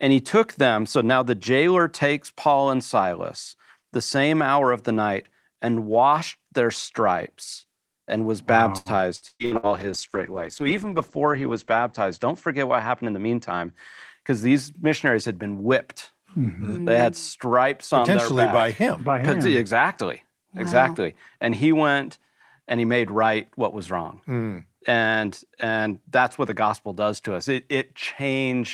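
Right after "stripes and was wow", from 8.77 to 9.69 s, repeated packet loss gives a robotic sound. Five gaps open in under a second, the longest 118 ms. Each is patched by stretching the last sound, so 43% of the stretch is filler, choppy with pieces missing.

A call bitrate drop begins at 9.40 s and lasts until 13.82 s. The encoder got far fewer bits. The top end falls from 20 kHz to 8 kHz, which fits a drop from 32 to 11 kbps. The speech turns muffled and watery, worst for about 2.4 s.

Inside that stretch, from 13.04 to 13.67 s, a jitter buffer speed-up follows. The receiver had too much audio queued and cut out tiny pitch-period slices, around 70 ms in all. Speech runs at 111% speed at the same pitch and sounds hurried just before "because these missionaries had".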